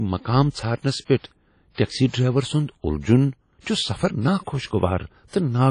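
Throughout the speech there is plainly audible WMA compression, likely from a low-bitrate transform encoder, consistent with about 32 kbps. Quantisation noise smears across long blocks, giving a ringing, washy texture and a hiss that pumps with the signal, with nothing above 10 kHz.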